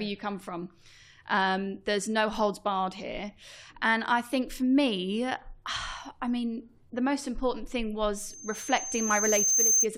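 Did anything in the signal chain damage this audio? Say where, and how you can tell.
Yes. A loudspeaker feedback squeal enters in the acoustic and analogue path from 8.18 s to 9.87 s, just after "the most important thing." A single 6.3 kHz tone swells over about one and a half seconds until it is somewhat louder than the speech. The microphone is hearing its own loudspeaker, with loop gain above one at that frequency. A steady interference whistle would start at full level instead of building up like this.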